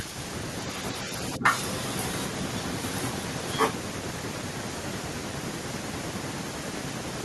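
A speech recording, heard through a call codec whose band stops near 12 kHz, has the other side's voice leaking through from 0.61 to 2.27 s at roughly the talker's level, again at 2.83–3.22 s a little quieter, and at 3.49–3.72 s noticeably louder than the talker. A second voice rather than the talker's own reverberation points to a likely incomplete echo cancellation of loudspeaker playback. Inside the first stretch, around 1.38–1.43 s, the talker's own voice briefly drops by something like 10 dB. That is speech suppressed in double talk, likely the canceller ducking both voices at once, and it differs from a network dropout because the level dips rather than going silent.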